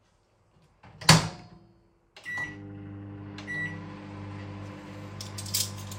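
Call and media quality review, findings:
Nothing stood out on listening to the sound, and no finding is raised for this ticket.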